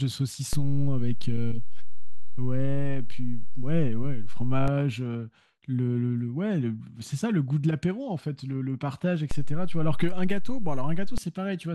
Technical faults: DC step

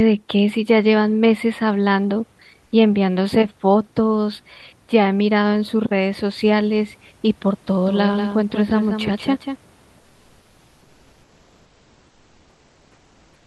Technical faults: comfort noise in place of the background; doubled audio track

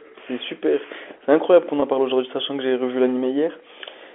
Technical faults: packet loss with pitch repetition

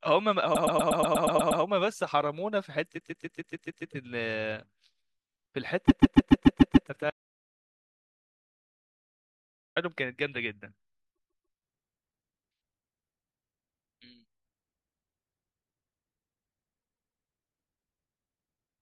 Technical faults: repeated frames; audio dropout to silence

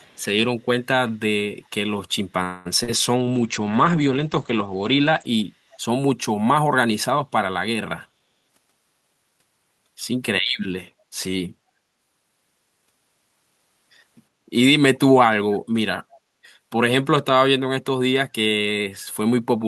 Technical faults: echo leak; call audio freeze; short concealed packet loss; call bitrate drop; jitter buffer speed-up

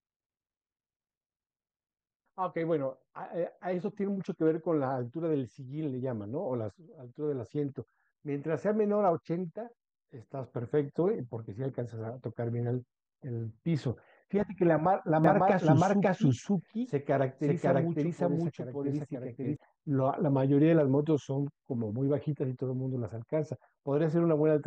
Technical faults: doubled audio track

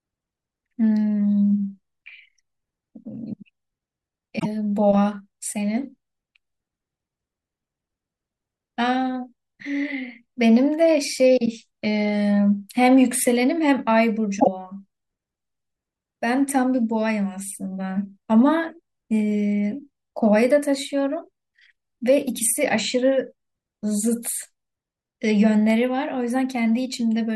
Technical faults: damaged data in a compressed stream

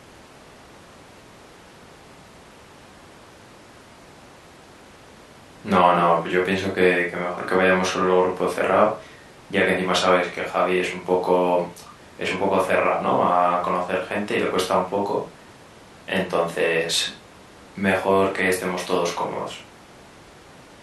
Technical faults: none

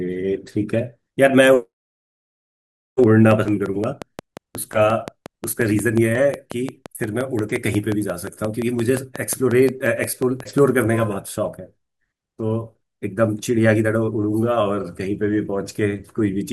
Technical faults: train of clicks

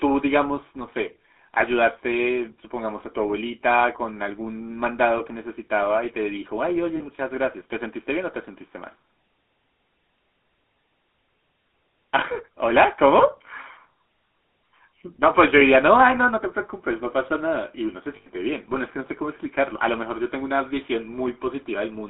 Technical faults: GSM full-rate codec; lost GSM frames

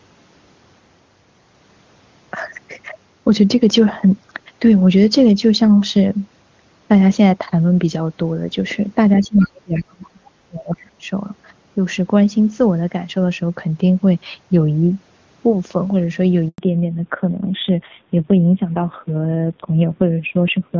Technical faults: other side's voice leaking through; speech suppressed in double talk; handover gap; fallback to narrowband

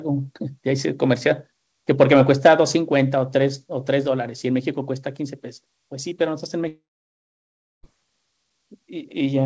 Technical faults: long network dropout

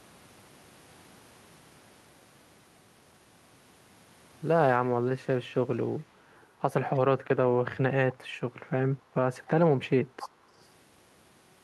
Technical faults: echo leak

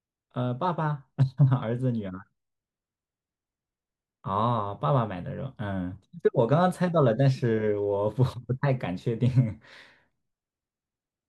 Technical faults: none

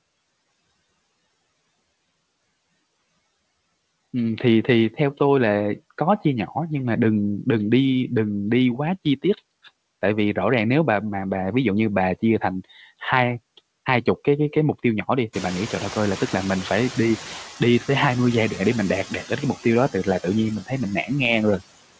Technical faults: noise suppressor artifacts; noise suppressor catching up; speech cut by the noise suppressor

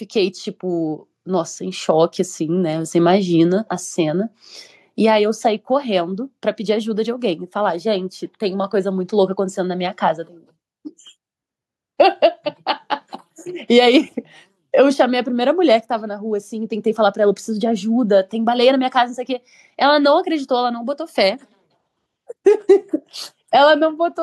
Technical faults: microphone volume stepped up

